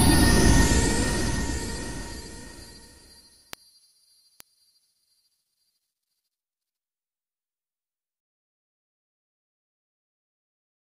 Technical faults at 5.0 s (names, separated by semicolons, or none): word clock ticks